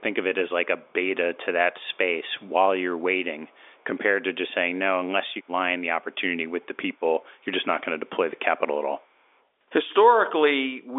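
Echo leak at 0.84–0.93, 1.80–1.98, 2.27–2.52, 3.00–3.04 and 3.46–3.84 s: faint delayed copies, 245 ms late and roughly 35 to 40 dB down, likely from far-end speakerphone residue escaping its echo canceller.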